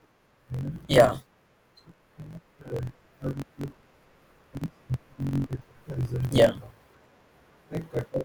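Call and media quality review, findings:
Block size mismatch (truncated), throughout the speech. Buzz at 45.9 Hz, speech running 1.07x fast at near-normal pitch. The writing stage's blocks exceed the reader's, so each block's tail is discarded; the buzz rate fits a 1024-sample write block.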